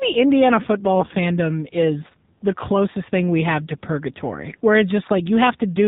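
Throughout, the speech has been squeezed through the AMR narrowband mobile codec, which resamples to 8 kHz and rebuilds the voice from a vocal-tract model fed by sparse pulses. Nothing above 4 kHz survives, so the sound is muffled and phone-like. The coding damage is plainly audible, with a buzzy, synthetic edge that points to one of the lower AMR-NB modes, consistent with about 7.4 kbps.

From 0.96 to 1.15 s, just before "is the closest thing", AMR bit errors strike. A weak link flipped a few percent of the lightly protected bits while the frames still passed their checksum, so the decoder placed its excitation pulses wrongly and misread fine pitch, gain and spectral values. For about 0.2 s the voice keeps roughly its pitch and loudness but turns hoarse, scratchy and gargly.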